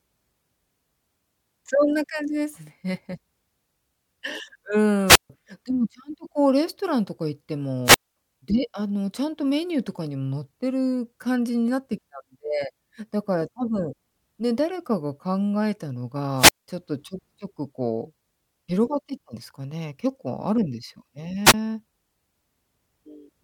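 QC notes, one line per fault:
5.06–5.30 s, 7.84–8.17 s, 16.37–16.68 s, 21.45–21.54 s: wireless microphone squelch dropout. The RF signal fades, hiss rises briefly, then the receiver's squelch mutes the output for about 144, 224, 195 and 19 ms respectively before the speech returns.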